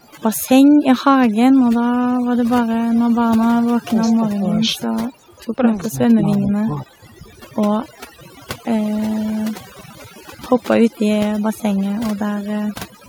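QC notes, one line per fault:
throughout, overdone noise removal: A noise reduction stage was set far too aggressively, cutting individual frequency bands down or out wherever they approached its noise estimate. Quiet parts of the speech are lost with them, leaving a lowered background with twinkling specks.
0.03 to 0.11 s and 4.05 to 4.10 s, echo leak: The far end's echo canceller likely let some loudspeaker pickup through, so a copy of the speech returns 348 ms late. The first scrap sits about 40 dB under the speech and is barely there. The second is a fragment at about 15 dB down.
3.91 to 3.99 s, 4.17 to 5.01 s, 5.90 to 6.10 s and 6.37 to 7.15 s, speech suppressed in double talk: With both sides talking at once, the echo canceller likely failed to separate the local talker from the loudspeaker echo and turned everything down. The speech dips about 10 dB in the first brief spot and about 20 dB in the others, losing level for up to about 0.7 s at a time.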